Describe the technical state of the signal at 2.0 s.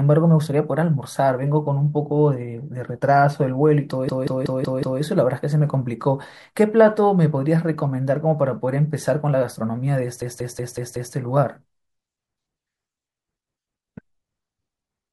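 At 2.0 s the speech signal is intact, with no audible fault at that moment.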